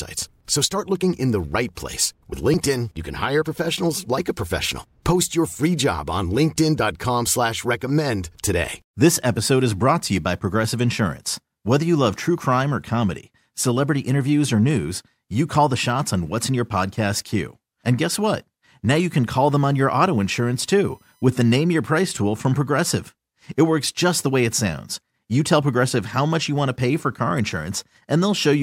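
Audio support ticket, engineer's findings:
USB whine, 19.38 to 21.55 s. Fixed-pitch tone on a 1 kHz base, harmonics up the spectrum, loudest around 16 kHz. Sits roughly 40 dB under the speech. Probable component: USB interface or hub feeding power or ground noise into the analogue path. Mechanism: bus current pulsing every 1 ms frame, leaking in as a steady whine. Worth checking the grounding and power on that USB link first.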